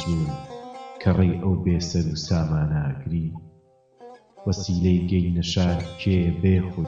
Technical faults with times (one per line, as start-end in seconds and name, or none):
3.35 corrupt frame decoded
5.48 corrupt frame decoded